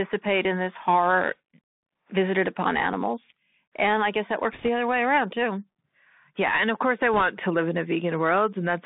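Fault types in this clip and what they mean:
Bluetooth CVSD headset codec: The entire clip is carried through the narrowband headset codec, a one-bit delta modulator whose step size adapts as it tracks the waveform. The passband sits at about 200 Hz to 3.6 kHz, so everything above is gone and the speech sounds boxed-in and telephone-like. The coding damage is plainly audible: sibilants come out scratchy, loud bright passages smear where the step cannot keep up, and a fine granular hiss sits under the voice, consistent with a 64 kbit/s CVSD stream.
bit errors on a Bluetooth voice link: Two short bursts of corrupted bits hit the link, from 4.53 to 4.68 s, between "I guess that" and "other way around too", and from 7.14 to 7.22 s, between "of course I" and "to live in a". Because each bit nudges the waveform only slightly and the error fades quickly, there are no sharp clicks. Instead each burst adds a brief rushing crackle over the speech, at an error rate of around 2 percent.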